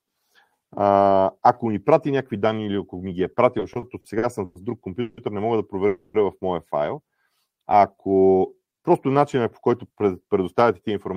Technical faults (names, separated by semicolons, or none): repeated stalls (stutter); call audio freeze; jitter buffer slow-down